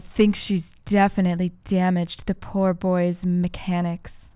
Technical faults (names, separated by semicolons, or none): none